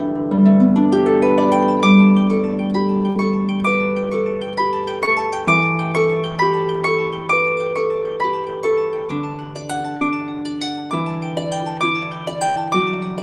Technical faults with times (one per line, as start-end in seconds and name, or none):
0.35-0.39 short concealed packet loss
3.09-3.17 burst of packet loss
5.05-5.09 short concealed packet loss
9.97-10.03 short concealed packet loss
12.49-12.57 burst of packet loss